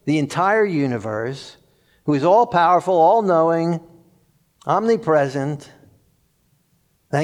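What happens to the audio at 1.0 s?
Nothing goes wrong at 1.0 s; the speech runs on intact through that point.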